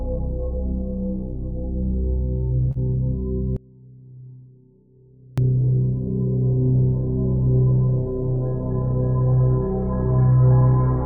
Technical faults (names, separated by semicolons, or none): short concealed packet loss; audio dropout to a faint residue